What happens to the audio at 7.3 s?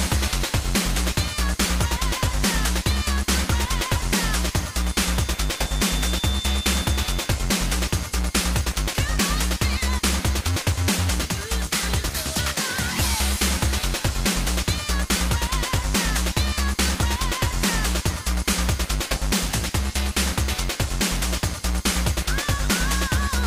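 At 7.3 s a feedback whistle is still sounding, near its end. It runs from 4.69 to 7.39 s. A thin, steady tone at 3.6 kHz sits well below the main sound, swelling and fading slowly in level. The likely cause is a loudspeaker-to-microphone loop held just short of runaway.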